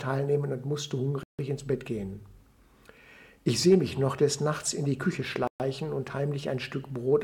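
Two brief dropouts cut the sound to dead silence: one at 1.23 s lasting about 155 ms, and another at 5.47 s lasting about 126 ms. In both cases the audio then picks up again. That pattern points to a Bluetooth stall as the likely cause. Interference would hold up the wireless packets long enough for the headphones' buffer to run empty, so playback simply freezes until the resent packets arrive.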